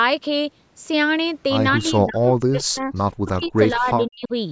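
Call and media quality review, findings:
Speech suppressed in double talk, 1.75–2.94 s and 3.15–4.32 s. Talker dips in chunks, down by roughly 40 dB at worst, about a second then most of a second affected. Likely echo canceller mistaking overlapping far-end audio for echo and attenuating both.

Echo leak, 2.95–3.03 s and 3.45–3.49 s. Brief faint delayed copy of the voice, 160 ms behind, some 30 to 35 dB under the speech. Likely loudspeaker-side echo canceller passing residual pickup back down the call.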